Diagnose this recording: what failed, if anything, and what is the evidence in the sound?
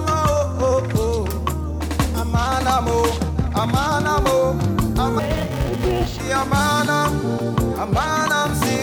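Sample-format conversion failed: interleaved audio read as planar. From 5.19 to 6.20 s the sound turns dull and robotic, buzzing at 345 Hz, which fits 128-sample, 2.9 ms blocks.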